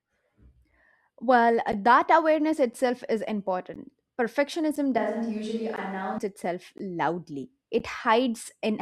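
It's a speech clip with two things going on. First, there's a gap between stream segments roughly every second, at 0.71, 1.72, 2.73, 3.74, 4.76, 5.76, 6.78 and 7.79 s. Each is a hard-edged hole of about 7 to 16 ms where the segment timestamps don't quite meet and the player pads with silence, which fits 1-second segments. Second, from 4.98 to 6.18 s the sound suddenly goes roomy and hollow, with thinner bass, a drop of about 5 dB, and room noise coming up to about 30 dB below the speech. That's likely a switch to a distant microphone after the close mic dropped out, and it snaps back just as abruptly.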